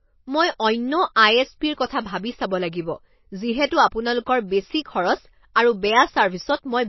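Heavy MP3 compression is the likely cause of the damage running through the whole of this speech clip. Starved of bits, the encoder has thrown away everything above 5.8 kHz and dropped weak frequency lines that flicker in and out from frame to frame, a level of loss that fits a low bitrate around 24 kbps. The result is a dull, band-limited sound with a plainly audible watery, swirling texture and smeared consonant attacks.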